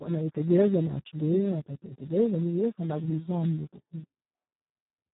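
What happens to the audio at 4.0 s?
At 4.0 s, as throughout the speech, Speex codec damage starves the excitation, consistent with about 4 kbps: hoarse, robotic, with a spectrogram showing nothing above 3.9 kHz.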